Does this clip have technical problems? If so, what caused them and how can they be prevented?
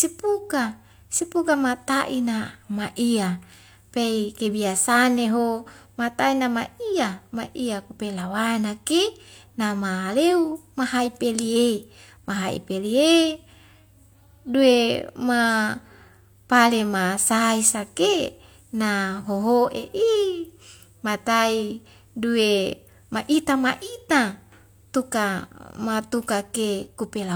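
No, there are no technical problems in this clip. Nothing in it calls for a cause to trace or a fix to prevent.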